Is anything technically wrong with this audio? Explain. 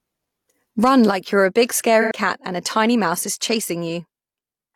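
Yes. From 2.01 to 2.12 s the speech turns into a brief smeared, noisy patch. This is AAC frame loss with concealment: about 85 ms of data went missing, which fits two lost AAC frames, and the decoder filled the gap by reusing the last good spectrum.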